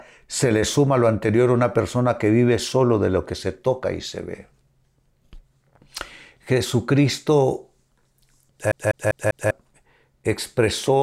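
From 8.72 s to 9.51 s the speech gets caught in a CD stuck on one turn. A scratch on the disc throws the laser back to the same spot on every revolution. So a slice of about 0.2 s, 198 ms, plays four times in a row. A brief mute sits at each jump back. The result is a quick, even stutter. It is the mechanical repeat of a skipping CD.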